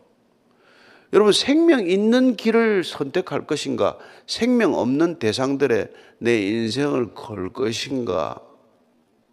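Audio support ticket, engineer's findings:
Time-stretched section, 6.26 s to end of clip at 9.3 s. Likely cause: a pitch-preserving stretch in the editing or conform stage, slowing the tail to 0.63x by repeating short grains of audio. Pace of speech drops abruptly at 6.26 s, pitch unchanged. The slowed portion drags through to the end.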